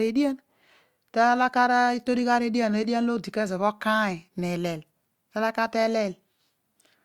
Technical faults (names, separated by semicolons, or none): none